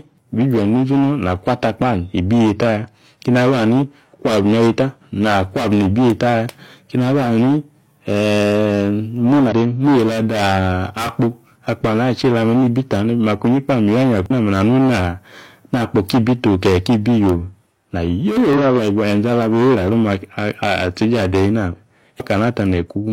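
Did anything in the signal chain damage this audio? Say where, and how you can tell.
Yes, damaged data in the compressed stream: short glitches at 9.48–9.52, 14.26–14.31, 18.53–18.58 and 22.16–22.22 s, where bad frames made the decoder lose sync and hunt for a new frame header.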